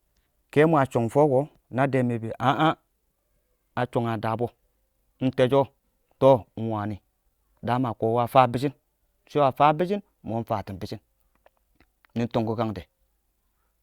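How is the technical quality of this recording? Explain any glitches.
Nothing here trips me up: there are no glitches to point to anywhere in the recording.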